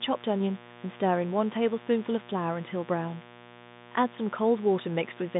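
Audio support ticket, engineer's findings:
Raspy steady buzz under the speech, whole clip, roughly 15 dB below it. Mains buzz, 60 Hz: switching spikes from dimmer, rectifier or unshielded lead, twice per cycle, harmonics filling 150 Hz to 3.7 kHz G.711 telephone band.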